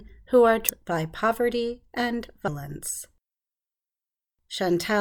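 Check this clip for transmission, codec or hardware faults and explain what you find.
There is one fault, damaged data in a compressed stream, at 0.69 s, between "who are" and "by poverty and". Corrupted bytes make the decoder misread a frame and lose sync, producing a brief glitch. On a spectrogram it shows as a thin vertical disturbance; the waveform shows an abrupt discontinuity.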